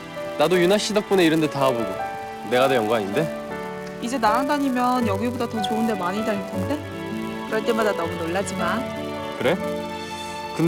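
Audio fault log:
throughout: filter restarted on every block. A steady 172 Hz buzz tracks the signal's level because the filter restarts from silence each block, which fits 256-sample blocks.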